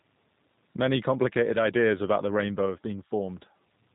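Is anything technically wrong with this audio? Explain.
Yes. Two faults run through the whole speech clip.

Low bit depth without dither affects the entire clip. Quiet stretches and decaying word endings sound grainy, with a gritty distortion that rises and falls with the speech. The error sits roughly 40 dB below the signal. The likely cause is truncation to very few bits, around 9, without dither, so the rounding error tracks the waveform. Zoomed in, the waveform shows visible stair-steps. A spectrogram shows signal-correlated hash instead of a smooth noise floor.

G.729 codec processing also affects the entire clip. The speech stays intelligible but sounds rough, buzzy and slightly synthetic, as it does at the plainly audible damage level of the G.729A variant at 8 kbit/s. The codec rebuilds each short frame from a vocal tract filter, a pitch predictor and a few pulses. The real waveform is therefore replaced by a model, and fine detail and breath noise warble. 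On a spectrogram, energy stops abruptly at 3.8 kHz, and harmonics look smeared and blocky from frame to frame.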